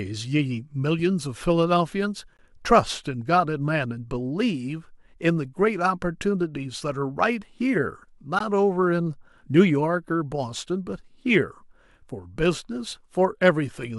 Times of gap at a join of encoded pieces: 2.37, 8.39

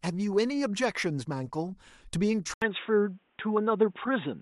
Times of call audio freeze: none

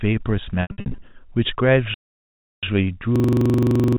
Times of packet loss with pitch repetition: 0.62-1.02

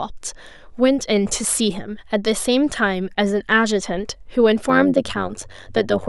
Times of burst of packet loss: none

